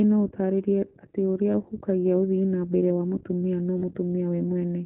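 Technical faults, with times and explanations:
throughout, iLBC codec: plainly audible narrowband coding, with nothing above 4 kHz and a slightly rough, synthetic edge to the speech. Each frame's excitation is coded on its own, and the texture fits the 15.2 kbps mode with 20 ms frames.
1.52–1.54 s and 3.78–3.82 s, lost iLBC frames: after "no ũtarĩrie atĩ ũrĩa" there's a brief buzzy held-vowel smear, about one frame, before "ũhukagia ũthii". After "nambere wa mũtumia no" there's a longer one, about two frames. The decoder repeats the last pitch cycle with noise, and the speech snaps back right away.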